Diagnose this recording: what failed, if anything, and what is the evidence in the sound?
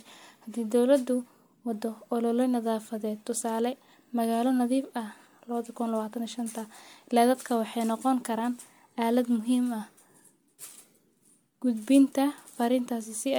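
Codec stage: generation loss, with the speech likely re-encoded as MP3 about four times. Throughout, it sounds swirly, hollow and smeared, with blurred attacks.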